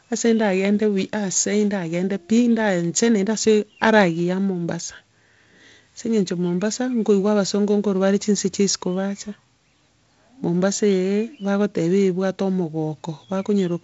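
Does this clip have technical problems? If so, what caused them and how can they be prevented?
No, this speech clip has no technical faults.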